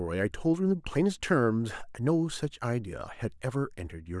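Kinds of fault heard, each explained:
No faults turn up anywhere in this stretch of speech, so there's nothing here to name or explain.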